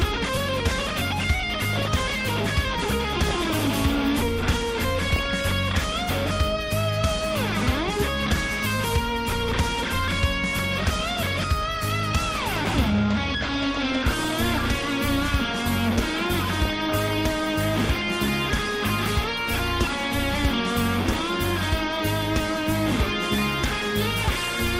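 MP2 compression runs through the whole clip. The sound is dull, with a gurgling, granular edge. This likely comes from MPEG Layer II coding at a low rate, around 80 kbps. At that rate the coder can't fund all of its 32 sub-bands, so upper bands drop out and flicker back. The bands that remain are quantised coarsely, which produces the grainy texture.

DAB burbling appears at 1.52 to 1.95 s, 3.25 to 3.67 s, 5.08 to 5.53 s, 13.77 to 14.59 s, 16.53 to 17.21 s and 24.31 to 24.58 s. In each burst, burbling sits over the sound. This points to weak reception: a small fraction of a percent of bits arrive wrong, and some of those errors pass error correction. Corrupted samples then put short blips of noise in single sub-bands, and corrupted scale factors make individual sub-bands jump in level for up to a frame.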